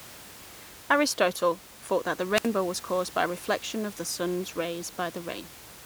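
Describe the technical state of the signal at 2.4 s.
A short burst of hiss swells, then the speech falls into a near-silent gap of about 65 ms before returning, all between 2.34 and 2.49 s. This is a wireless microphone squelch dropout: the FM radio link fades, and the receiver's squelch briefly mutes its output.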